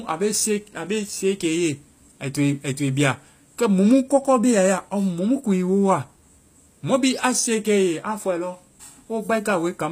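Speech, with HE-AAC compression damage audible throughout. The treble sounds bright but synthetic. The s sounds come out gritty and lispy, with a metallic edge. Nothing remains above 15.5 kHz. The likely cause is spectral band replication. Only the lower spectrum is properly coded, and the top is rebuilt by copying lower bands upward under a coarse envelope. Those copied harmonics do not line up with the real ones. The strength of the damage fits a low bitrate, around 24 kbps.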